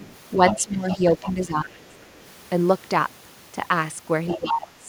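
Right at the start, from 0.00 to 0.06 s, the speech dips by about 10 dB. A faint second voice, about 30 dB below it, sits underneath from 0.04 to 0.16 s. This is speech suppressed in double talk, with the other side's voice leaking through. The likely cause is an echo canceller that could not tell the local talker from loudspeaker echo, so it turned both down and still let some echo pass.

From 0.36 to 1.04 s the voice sinks by about 15 dB. From 0.48 to 0.98 s the leaked voice is much more audible, only about 10 dB under the talker.

From 1.20 to 1.97 s the deepest cut comes, about 20 dB, with a brief leak from 1.23 to 1.33 s about 15 dB down.

Near the end, leakage about 15 dB down appears from 4.28 to 4.49 s. The speech is then pushed down about 20 dB from 4.35 to 4.86 s.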